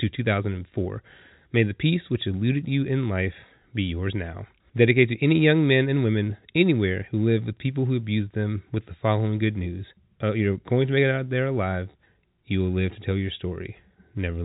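Nothing stood out on listening to this speech, which has the narrow sound of G.711 telephone coding, with nothing heard above 3.8 kHz.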